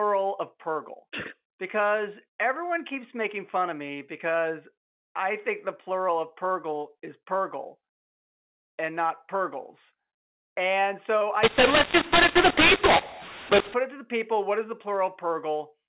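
From 11.43 s to 13.74 s, between "so I" and "it to the people", the speech shows a mu-law and A-law mix-up: samples coded with the mu-law curve are decoded with the A-law curve. The two logarithmic mappings disagree, so some levels come out too loud and others too soft, and near-silent samples are lifted well above zero. The speech turns harsh and gritty, and the gaps fill with noise. Before and after that stretch, the 8 kHz mu-law telephone band decodes cleanly.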